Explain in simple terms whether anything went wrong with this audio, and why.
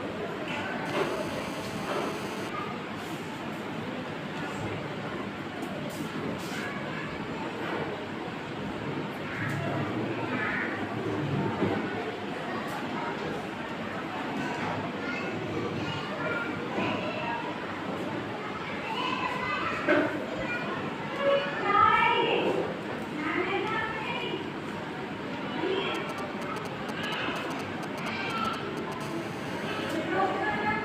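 Yes, a mobile phone got too close to the recording gear. From 0.86 to 2.50 s, and again from 29.01 to 29.97 s, there's GSM phone buzz: a harsh, raspy drone at about 217 Hz, because the phone's radio pulses were picked up and turned into sound by the audio circuit.

Just before that second buzz, from 25.95 to 29.01 s, you get GSM signalling bursts, a galloping dit-dit-dit of ticks and short buzzes, fairly loud, as the phone chatted with the network before settling into a call.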